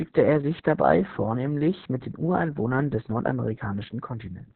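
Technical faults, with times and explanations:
throughout: Opus voice compression, coding SILK-only at what sounds like about 6 kbps, cuts the band at 4 kHz, leaving speech heavily muffled, hoarse and robotic.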